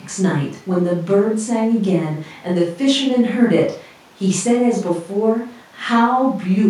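No technical faults are audible.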